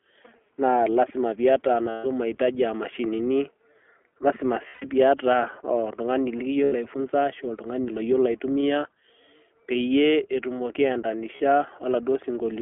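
From start to finish the speech sounds slightly rough and synthetic, with nothing below about 300 Hz or above 3.4 kHz. This is the iLBC codec, a narrowband coder that codes each 20 ms frame on its own; the plainly audible damage fits its 15.2 kbps mode.

Lost iLBC frames sound like a held, faintly buzzy vowel at 1.90 to 2.06 s and 4.68 to 4.85 s (each about 140 ms), at 6.64 to 6.74 s before "ai funza", and briefly at 11.36 to 11.40 s after "peyie etumoki". The decoder repeats the last pitch cycle with noise, then recovers at once.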